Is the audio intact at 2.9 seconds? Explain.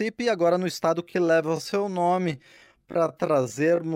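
No, 2.9 s falls in a time-stretched section running from 1.0 s to the end, slowed to about 0.61x, likely by repeating short pieces, so it drags.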